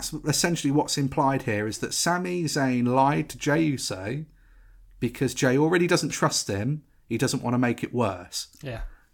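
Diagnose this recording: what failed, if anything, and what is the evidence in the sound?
No fault heard anywhere.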